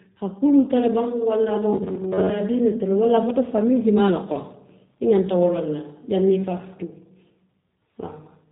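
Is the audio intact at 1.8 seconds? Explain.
No. At 1.8 s the audio sits inside a stretch of robotic sound from repeated short buffers, running from 1.73 to 2.30 s. The speech there becomes a rigid, metallic buzz near 94 Hz that only loosely tracks the syllables. The likely cause is late-arriving audio, with the playback side looping a short fragment to fill the gap while roughly half the real signal is skipped. A buzz at that pitch fits a repeated segment of about 10.7 ms.

Underneath that, and through the whole clip, the sound carries plainly audible G.729 codec damage. Nothing passes above 3.8 kHz, so the speech is narrowband and dull at the top. The codec rebuilds each 10 ms frame from a vocal tract filter, a pitch predictor and a few coded pulses rather than the actual waveform, which gives the speech a rough, slightly synthetic texture consistent with an 8 kbit/s VoIP path.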